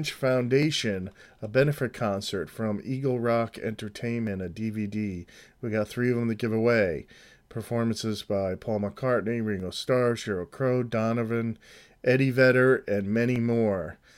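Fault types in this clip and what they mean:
Dropped samples: A few samples, about 0.7 ms worth each time, were likely lost from the stream, so the waveform leaps abruptly from one value to a later one instead of continuing smoothly. Nothing audible is removed from the speech; each gap shows only as a single sharp click, a thin vertical line across the spectrum, at 0.63, 4.27, 9.60 and 13.36 s.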